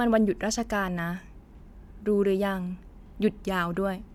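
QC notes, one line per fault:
No faults found in the speech. Nothing in the audio calls for a flag.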